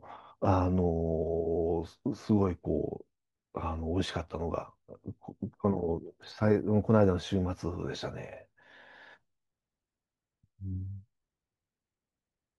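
Nothing in this speech recording stands out as a technical fault, so there's no problem to point to at any moment.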